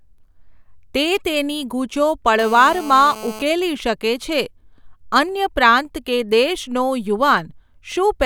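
From 2.39 s to 3.43 s, ending just before "શકે છે", a GSM phone buzz sits under the speech, about 16 dB below it. A nearby 2G handset on a call was pulsing its transmitter 217 times a second, and the audio circuitry rectified those radio bursts into sound. The result is a hard, raspy, steady buzz at 217 Hz, rich in harmonics. Mains hum would be a smoother tone at 50 or 60 Hz.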